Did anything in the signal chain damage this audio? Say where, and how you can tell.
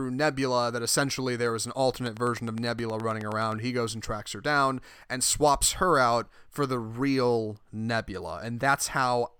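Yes: a train of clicks runs from 1.96 to 3.53 s, just after "essentially there was an". About fifteen same-shaped ticks arrive at a steady 9.6 per second, peaking about 10 dB above the speech, likely from interference repeatedly pulsing the analogue wiring.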